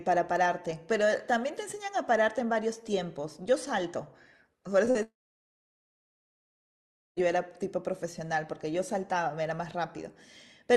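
A speech recording carried over a call codec whose top end stops near 12 kHz, consistent with Opus at about 32 kbps, has two short concealed packet losses. Packets missed the decoder at 4.85 to 4.89 s and 4.91 to 4.97 s, and the receiver extrapolated the last sound across each gap, leaving brief smears. From 5.03 to 7.18 s a long network dropout likely cut off the audio stream. The receiver filled this gap with a fading continuation of the last sound for roughly a tenth of a second, then about 2 s of silence follows before the audio resumes with that stretch missing.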